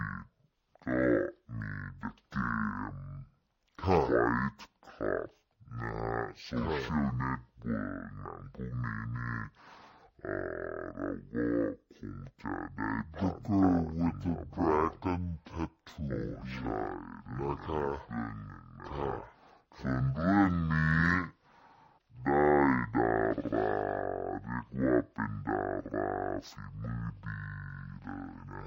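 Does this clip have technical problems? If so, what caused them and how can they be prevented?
Yes. Throughout the clip the sound runs at half speed and sits a full octave low, 12 semitones down, with a fainter mirrored copy of the content showing up in the upper half of the spectrum. This is stereo read as mono: the interleaved left and right samples were taken one after another as a single channel, so each moment's pair of samples became two consecutive samples. That doubles the apparent length and halves the pitch. To prevent it, make sure the reader uses the file's declared channel count and deinterleaves stereo data before playback or processing.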